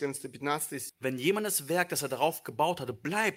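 At 0.89 s a skip ahead occurs: roughly 0.7 s of speech is dropped while later audio was queued, so playback jumps forward with the two sides spliced almost directly.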